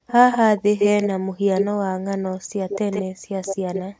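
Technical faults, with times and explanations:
0.0–0.07 s, 1.22–1.42 s, 2.41–2.52 s, 3.1–3.3 s and 3.94–3.99 s: background gated by the echo canceller. The room sound falls away by up to about 40 dB, then comes back. The canceller clamps the microphone hard while the loudspeaker plays.
0.07–1.66 s and 2.69–3.82 s: echo leak. A second copy of the speech trails 150 ms behind. In the first stretch it is about as loud as the speech. In the second it sits about 10 dB lower. The likely cause is loudspeaker sound reaching a microphone and slipping past its echo canceller.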